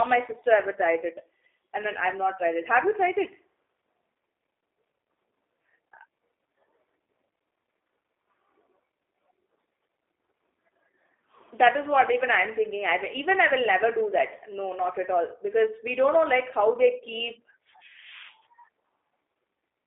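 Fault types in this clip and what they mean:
G.729 codec: The speech is not carried directly but rebuilt from a model. The codec treats the vocal tract as a filter, adds a pitch predictor, and fills each 10 ms frame with a few pulses. Here that gives a rough, slightly synthetic sound, and the damage is plainly audible. The band runs from 300 Hz to 3.6 kHz. Nothing passes above 3.8 kHz. That thin, rough quality fits an 8 kbit/s G.729A stream.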